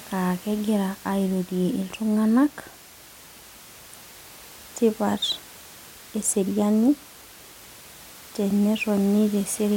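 No technical faults heard.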